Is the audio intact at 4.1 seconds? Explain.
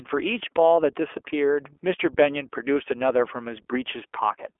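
No. At 4.1 seconds, as throughout the clip, the speech sounds narrow, slightly rough and synthetic, with plainly audible coding damage and nothing above about 3.7 kHz. This is the iLBC codec at work. It squeezes the signal into a telephone band of roughly 300 Hz to 3.4 kHz and codes each short frame's excitation independently of the previous one. That graininess fits 20 ms frames at around 15.2 kbps.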